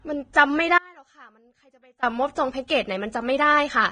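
Across the whole speech clip, heavy lossy coding has coarsened the spectrum. This is likely Vorbis compression at a low bitrate, around 22 kbps. Nothing survives above 9.7 kHz, and the remaining treble is quantised into grainy hiss, leaving the speech dull, rough and fizzy.

At 0.33 s the codec's block-wide quantisation noise spills ahead of a sharp onset, a pre-echo spread over about 16 ms. At 2.68–2.70 s the same pre-echo returns over about 22 ms. In both places a brief hiss runs just before the attack, which sounds softened and smeared.

From 0.78 to 2.03 s the signal path likely lost the wanted audio for about 1.24 s while the chain after the break stayed live. This produces an audio dropout to a faint residue. The speech cuts out abruptly, leaving only a faint trace roughly 30 dB below normal level, and then cuts back in just as suddenly.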